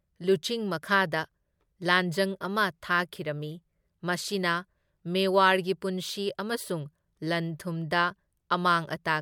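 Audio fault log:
No fault is heard in this speech clip.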